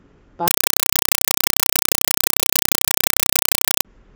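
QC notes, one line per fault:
0.48–3.85 s, compressed stream played as audio: the speech gives way to very loud, chattering static, 4 ms noise bursts repeating 31.25 times a second. An undecoded Dolby Digital (AC-3) stream was read as plain samples, so each frame plays as noise followed by zero padding.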